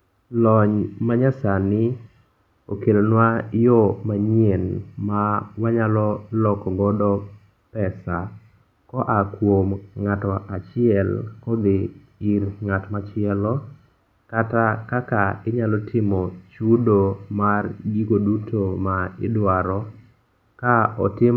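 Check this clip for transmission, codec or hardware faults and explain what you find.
No faults turn up anywhere in the speech recording, and the signal holds steady throughout.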